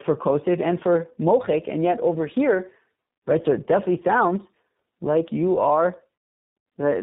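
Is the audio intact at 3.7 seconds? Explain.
No. At 3.7 seconds, as across the whole clip, the speech shows tandem speech coding. It passed through two low-rate speech codecs in a row, which fits an AMR-NB stage followed by iLBC with a G.711 link between them. Each coder re-encoded the previous one's degraded output, so errors compound. The result sounds rough, muffled and warbly, with nothing above about 3.8 kHz.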